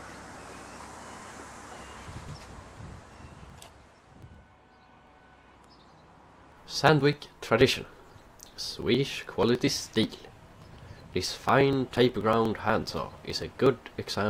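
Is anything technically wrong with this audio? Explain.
Yes. From 0.11 s to 14.15 s there are periodic USB or driver dropouts every 0.121 s. A recurring stall skips a few milliseconds of audio, producing steady ticks only where sound is present. Their strict regularity separates them from random buffer underruns.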